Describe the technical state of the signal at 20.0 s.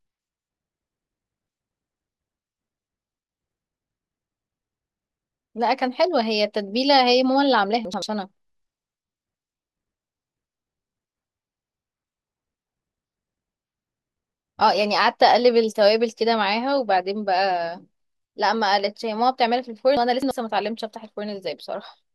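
At 20.0 s the speech hits a chunks out of order fault spanning 19.97 to 20.31 s. One 85.33 ms chunk arrived late and plays three chunks behind its proper place, after the segments that should follow it. Nothing is missing, but the sequence is scrambled, so the speech sounds briefly jumbled, with three hard joins. On a waveform, three abrupt discontinuities appear at the splices. On a spectrogram, formant tracks break and resume out of sequence within that third of a second.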